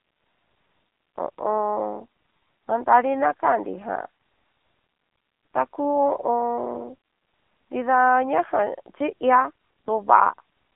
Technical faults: AMR narrowband mobile codec

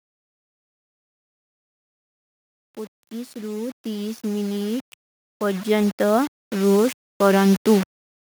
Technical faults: low bit depth without dither; automatic gain rising

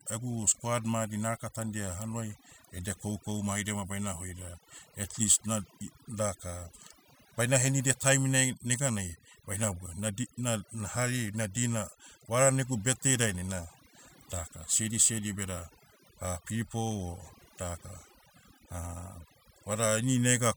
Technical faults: overdone noise removal

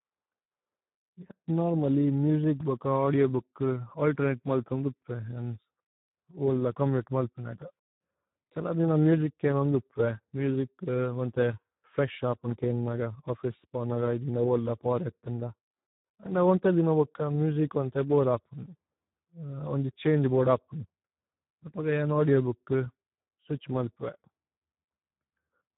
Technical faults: Speex codec

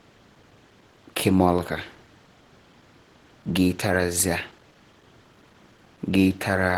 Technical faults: Opus compression

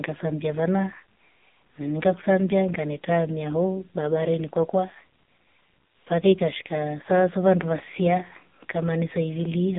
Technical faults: AMR narrowband mobile codec

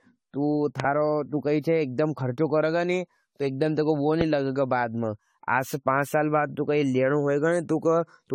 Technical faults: generation loss; loud pop

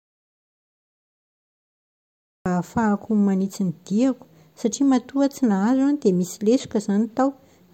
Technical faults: audio dropout to silence

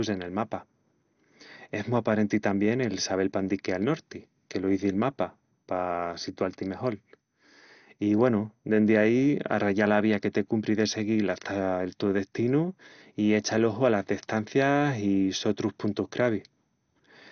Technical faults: MP2 compression

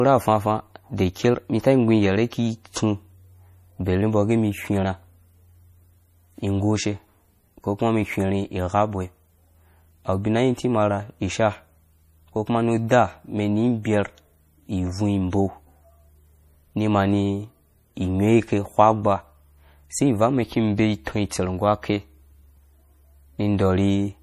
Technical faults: MP3 compression

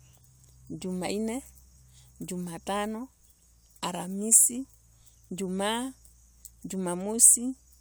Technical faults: none

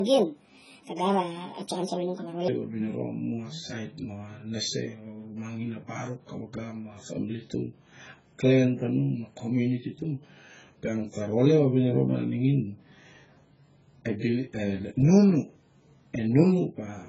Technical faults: AAC compression; section at the wrong speed

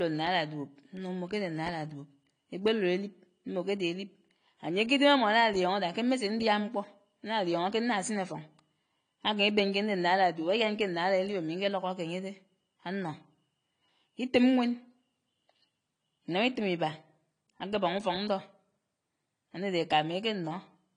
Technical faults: low-bitrate audio saved at a high bitrate

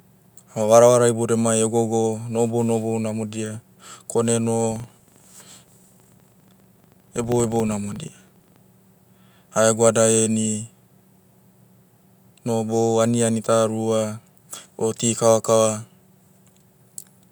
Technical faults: filter restarted on every block

